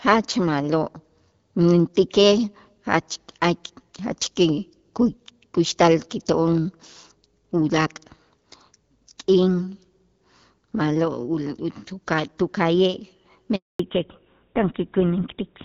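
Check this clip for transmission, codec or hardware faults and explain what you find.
Two transmission faults appear near the end of this speech clip, both tied to a network handover.

Handover gap, 13.55 to 13.79 s: the call was passed from one network to another and no speech frames arrived for 240 ms. The audio fades within a few tens of milliseconds and then goes fully silent. Unlike scattered packet loss, it is one clean hole.

Fallback to narrowband, 13.79 s to the end: after the switch the call no longer carries HD Voice. It drops to an older codec, which sounds consistent with GSM full rate. Nothing remains above 4 kHz, so sibilants lose their edge and the voice turns dull and rougher. Before the handover, the AMR wideband (HD Voice) codec's fuller band is audible, so this is a codec change rather than an ordinary low-pass filter.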